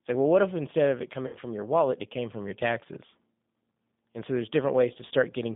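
From the very start the whole clip carries the sound of the G.729 codec, and it's plainly audible. The speech sits in a narrow telephone band, roughly 150 Hz up to 3.6 kHz, with nothing bright above that. Because the codec rebuilds speech from a vocal tract filter, a pitch predictor and a handful of pulses per frame, the result has a slightly rough, synthetic edge, which fits an 8 kbit/s G.729A stream.

Then at about 1.27 s there's a dropout handled by the decoder: VoIP packet loss concealed by the speech codec, running to about 1.36 s. Around 60 ms of audio went missing, which fits two lost packets. The decoder fills the hole by extending its last pitch and filter settings at falling gain, so the speech smears into a buzzy tone or coloured noise that fades, and because each frame builds on the last, it stays weak or warped briefly after the stream comes back.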